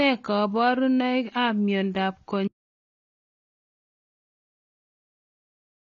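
AAC compression runs throughout the speech, likely from AAC-LC coding at a low bitrate of around 24 kbps. Nothing survives above 7.3 kHz, leaving the sound dull, smeared and audibly warbly.

An audio dropout to silence begins at 2.48 s, just after "kabarunoik ap miondoop", and lasts to the end. It is flat digital silence without room tone, likely from lost input.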